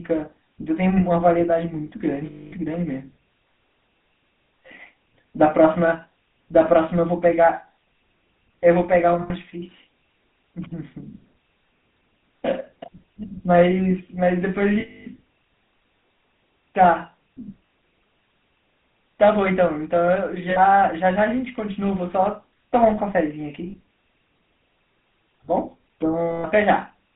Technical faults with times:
0.00-27.15 GSM full-rate codec
2.26-2.53 lost GSM frames
9.22-9.31 lost GSM frames
14.80-15.07 lost GSM frames
17.66-17.72 lost GSM frames
20.50-20.59 lost GSM frames
23.70-23.75 lost GSM frames
26.30-26.46 lost GSM frames

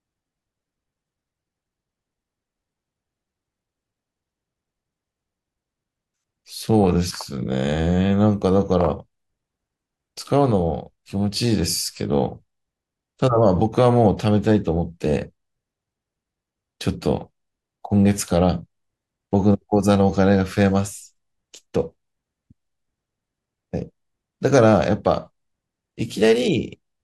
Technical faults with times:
none

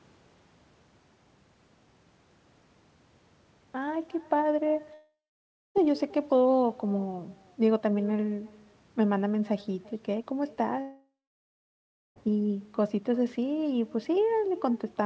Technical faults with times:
0.00-15.05 echo with no canceller
4.94-5.78 long network dropout
10.82-12.19 long network dropout

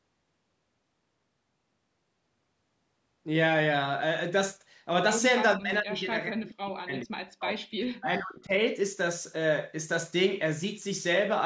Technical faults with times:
5.56-7.71 speech suppressed in double talk
7.97-8.54 speech suppressed in double talk

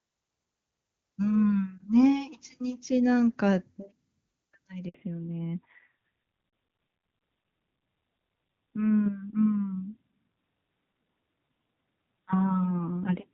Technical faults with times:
4.88-4.94 handover gap
4.94-13.34 fallback to narrowband

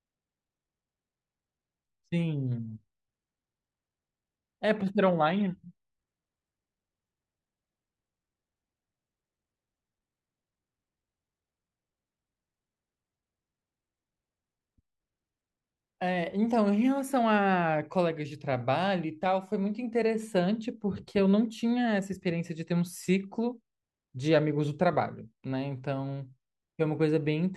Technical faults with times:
none

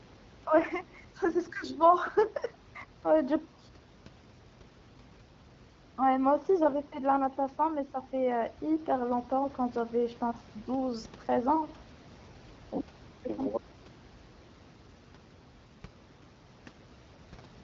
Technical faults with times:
none

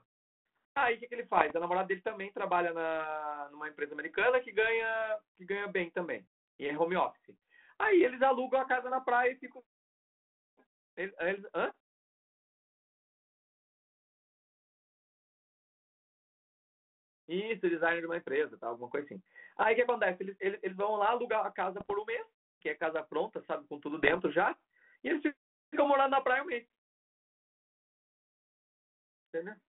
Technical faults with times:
1.37-1.52 bit errors on an ADPCM link
21.80-21.94 bit errors on an ADPCM link
24.03-24.21 bit errors on an ADPCM link

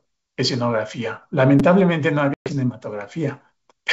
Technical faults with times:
1.59 repeated buffer
2.34-2.53 packet loss on an ADPCM call

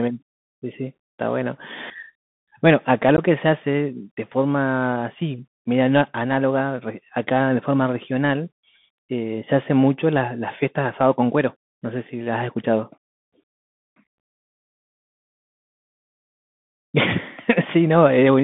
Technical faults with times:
0.00-18.44 Bluetooth CVSD headset codec
3.17-3.19 unconcealed Bluetooth headset packet loss
14.18 unconcealed Bluetooth headset packet loss

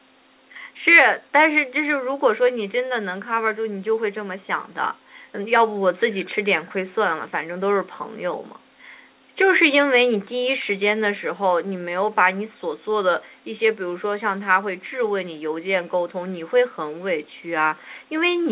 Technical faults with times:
none

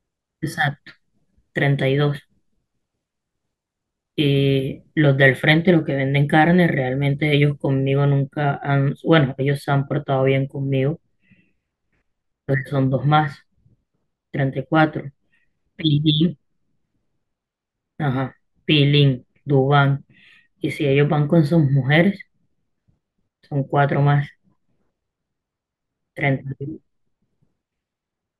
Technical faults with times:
8.11-28.40 de-emphasis applied wrongly

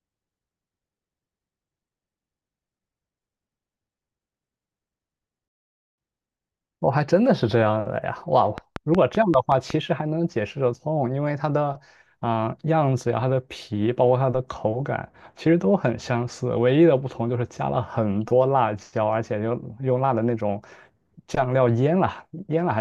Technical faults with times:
5.48-5.98 playback stall
8.58-9.71 train of clicks

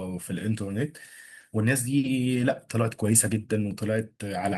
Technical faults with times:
2.35-2.45 lost packet rebuilt from error correction
3.22-4.20 periodic USB or driver dropouts

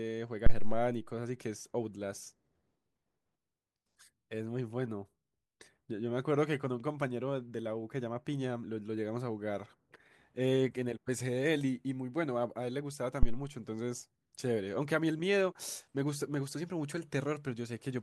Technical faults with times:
0.46-0.95 phantom power thump
13.23-13.43 phantom power thump

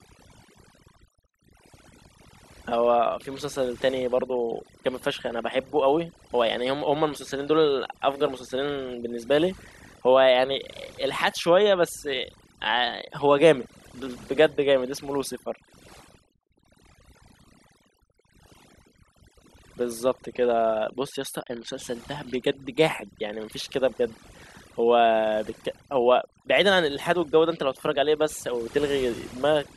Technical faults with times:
0.00-29.76 overdone noise removal

